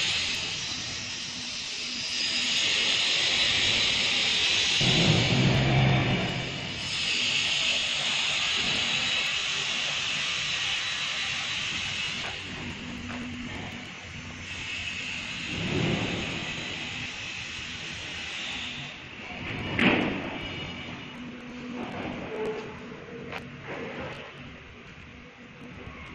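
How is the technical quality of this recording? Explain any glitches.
The recording is marred by six bursts of DAB burbling, at 1.64–2.25 s, 10.09–10.88 s, 13.72–14.60 s, 17.79–18.38 s, 20.06–20.47 s and 25.46–25.87 s. Each lasts roughly half a second to just under a second. Weak reception lets bit errors past the error correction into the MP2 stream, on the order of 0.3 to 0.7 percent. Corrupted samples and scale factors then throw individual sub-bands to wrong levels frame by frame, producing burbling blips of noise.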